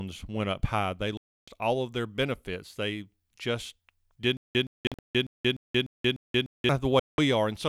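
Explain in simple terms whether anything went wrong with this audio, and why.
The sound cuts out completely three times: from 1.17 to 1.48 s, in several short broken bits between 4.87 and 4.99 s, and from 6.99 to 7.18 s, then picks up further along. These are Bluetooth dropouts, likely caused by wireless data reaching the headphones too late and being thrown away.

From 4.37 to 6.69 s, the same short scrap of speech, about 0.12 s long, plays seven times with dead silence between repeats, once every 0.3 s. This stutter with silent gaps was likely caused by the player stalling and replaying its last piece each time it retried, so the speech that should have played there is lost.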